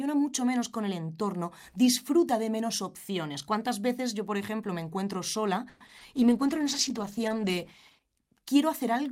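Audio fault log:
5.69–5.83 s, call audio freeze: right after "ejemplo me encuentro sola", the sound stretches into a fading buzz for about 110 ms. Likely delayed packets emptied the jitter buffer; nothing is lost.
5.87 s and 5.99 s, short concealed packet loss: two 20 ms holes were filled by continuing the previous sound. Each is heard as a brief smear or wobble.
6.16–8.09 s, call bitrate drop: the encoder falls from 64 to 13 kbps for nearly two seconds. The speech turns coarse and muffled, losing its high frequencies.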